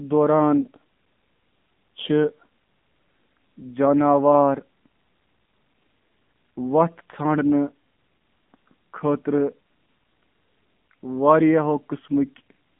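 Throughout, the speech sounds muffled, buzzy and somewhat synthetic, confined to roughly 150 Hz to 3.4 kHz. This is the AMR narrowband mobile codec: 8 kHz sampling removes everything above 4 kHz, and the plainly audible coarseness fits a low 7.4 kbps mode.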